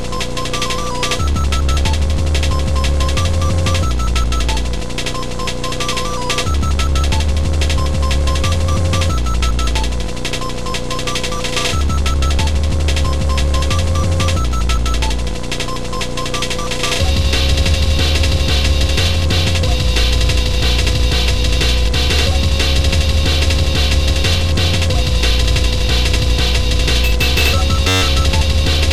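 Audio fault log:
27.88–28.02 s, system hang loop. The system froze while the sound hardware kept replaying its ring buffer. A 10.67 ms slice repeats 13 times, which fits a 512-sample buffer. That short loop gives a steady buzz near 94 Hz. Almost no audio is lost.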